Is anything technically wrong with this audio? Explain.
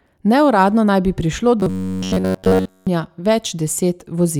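Yes. From 1.60 to 2.87 s, right after "naj bi prišlo", the speech turns into a robotic sound from repeated short buffers. It becomes a rigid, metallic buzz near 94 Hz. Audio likely arrived too slowly, so a roughly 11 ms slice was replayed through the whole stretch.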